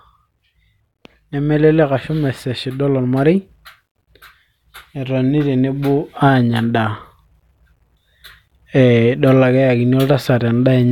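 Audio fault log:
Nothing to log here; the speech comes through without any technical faults to flag.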